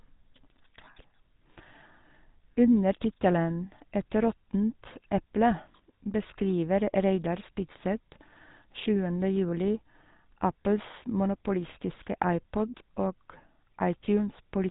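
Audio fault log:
Throughout: GSM full-rate codec. The speech has a buzzy, gravelly roughness. The codec models the vocal tract and drives it with a regular pulse train, so fine detail in the excitation is lost. Nothing above 3.8 kHz survives. The damage fits a 13 kbps GSM stream.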